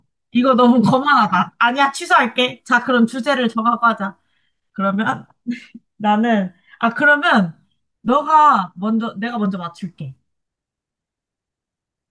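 There are no technical faults to describe here.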